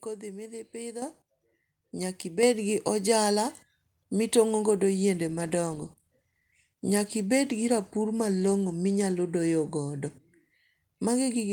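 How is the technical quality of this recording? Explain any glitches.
The technical quality is compromised by three faults: two sudden level jumps early on and a stretch of degraded, coarser coding later in the speech.

Microphone volume stepped up at 1.02 s (about 8 dB) and 2.43 s (about 5 dB). Automatic input gain raised the device level in one step, so speech and background jump together, unlike a talker simply speaking louder.

Call bitrate drop from 5.37 to 8.81 s, after "mitongo godo yiende" and before "minyalo doyogodo". The encoder fell from 32 to 18 kbps, making speech rough, watery or muffled rather than louder or quieter.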